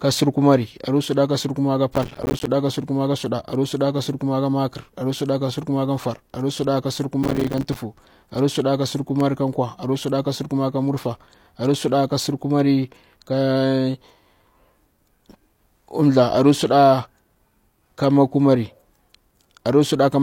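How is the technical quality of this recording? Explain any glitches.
The speech recording has three clear glitches: two bursts of processor overload crackle and a short run of CD scratch ticks.

From 1.96 to 2.47 s and again from 7.23 to 7.76 s, processor overload crackle tears through the speech. The processor fell behind and missed dozens of buffer deadlines in quick succession, and each missed buffer came out as a sliver of silence with abrupt edges. The gaps are spaced in a way that points to buffers of around 5 ms. Packed this densely, they sound like gritty, continuous tearing that stops cleanly once the load eases. That dense, half-second texture sets it apart from isolated clicks.

Between 8.99 and 10.28 s there are seven CD scratch ticks. A blemish on the disc surface corrupted more data on each rotation than error correction could repair, so the player patched or muted a brief stretch each time. 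The longest tick lasts only about 2 milliseconds. Unlike the overload crackle, these are separate, evenly spaced ticks that repeat with the disc's turning rather than merging into a smear.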